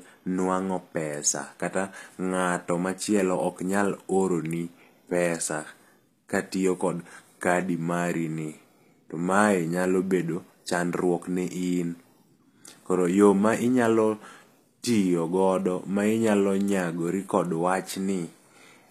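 HE-AAC compression, present throughout the clip, is the likely cause of plainly audible codec damage, at a quality that fits a bitrate around 24 kbps. The encoder spends its bits on the lower spectrum and synthesises the treble by copying lower bands upward under a coarse envelope, so the top end sounds artificial, with harmonics that fail to line up across the crossover. Nothing is present above about 14.9 kHz.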